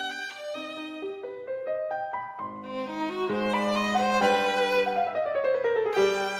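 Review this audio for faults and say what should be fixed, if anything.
Nothing needs fixing: the signal holds steady with no audible technical faults anywhere in the audio.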